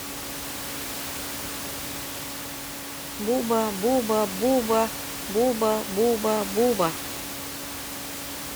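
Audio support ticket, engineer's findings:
Speech path checked with no fault found; room noise sits about 10 dB below speech level and comes from the recording environment, not the system.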